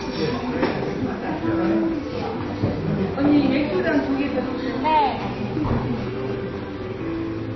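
From start to finish the top end stops dead at about 6.5 kHz, so everything sounds dull and boxed in. On top of that there are two different flavours of smearing and swirly, watery artefacts sitting together. That mix points to transcoding between lossy codecs, likely a low-rate AAC encode that was then squeezed again through MP3 at a similarly low rate. The second encoder wastes bits re-coding the first one's damage and adds its own, while the lowest cut-off in the chain sticks.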